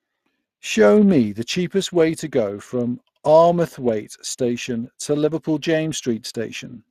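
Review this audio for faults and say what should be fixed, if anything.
Speex codec damage runs throughout the speech, start to finish. This CELP coder models the voice as a vocal-tract filter driven by an excitation signal. With a limited bit budget that excitation is coded coarsely, so the speech carries a plainly audible grainy, hoarse texture. The damage is consistent with a stream around 22 kbps, and nothing is present above 15.3 kHz, which points to the codec's band limit. To prevent this, record or transmit with a modern codec such as Opus at a higher bitrate, or keep the original uncoded capture.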